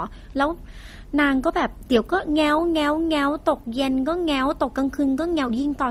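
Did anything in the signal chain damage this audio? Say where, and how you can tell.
Yes, at the codec stage: nothing above 15.8 kHz, with two distinct artefact textures stacked throughout. That is likely transcoding between lossy codecs, consistent with MP3 re-encoded as Opus. A single encode would leave only one texture.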